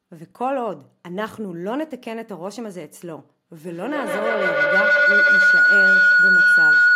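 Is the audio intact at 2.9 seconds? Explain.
Yes, at 2.9 seconds the speech is intact, with no audible fault at that moment.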